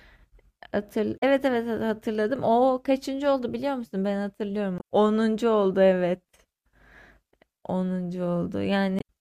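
Damaged data in a compressed stream at 1.16–1.23, 4.77–4.82 and 8.98–9.02 s makes the decoder misread corrupted frames, producing brief chirps, squawks, clicks or short holes.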